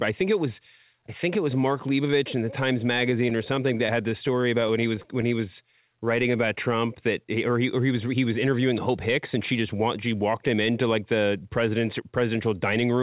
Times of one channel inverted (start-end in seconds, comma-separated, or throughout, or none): none